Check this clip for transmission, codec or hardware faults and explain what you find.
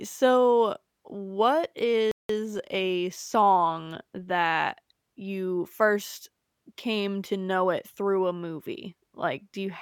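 Two related faults occur in quick succession early in the clip.

From 2.11 to 2.29 s there is a playback stall. The speech stops mid-flow for about 180 ms, leaving plain silence. The player most likely ran short of data, or its output thread was held up. Nothing reached the output until it recovered. The speech then resumes where it broke off. The gap reads as an unnatural hitch.

From 2.29 to 3.47 s comes a time-compressed catch-up. The player trims the backlog built up during the stall. It removes small slices of audio and cross-fades across the joins. The speech runs at 1.15 times normal speed while the pitch stays unchanged. It sounds hurried. Normal pacing returns at 3.47 s.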